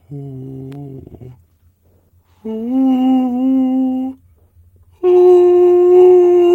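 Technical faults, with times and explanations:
0.94–3.91 s, call bitrate drop: the music goes rough and watery, and the top end dulls off, as if the call's bandwidth estimate dipped and the encoder was squeezed from something like 64 kbps down to about 15 kbps. With that few bits, everything gets quantised more coarsely and the highs get cut away. It bottoms out for about 1.4 s before the detail and brightness come back.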